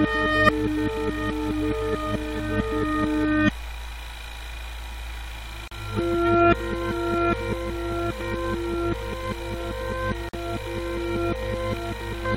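The audio was encoded as separate pieces and joined without trimming each encoder's start-up delay and end-of-stream padding, leaving a gap at a join of encoded pieces twice in this clip of sounds. At 5.68 s a gap of about 38 ms opens in the continuous sound, and at 10.29 s another of about 46 ms. Each dropout has its edges smeared by the codec, and the sound then resumes exactly where it broke off.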